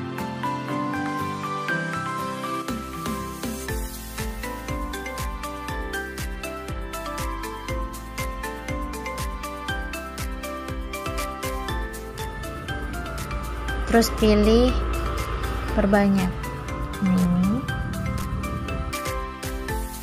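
A block of digital silence lands at 12.19 s and again at 18.22 s, each lasting about 5.8 ms, which fits a 256-sample buffer left unfilled when the output was due. The audio drops straight to zeros and returns without any fade, so both edges produce an abrupt discontinuity. Because the hole is so brief, each one is heard less as a gap than as a single sharp tick.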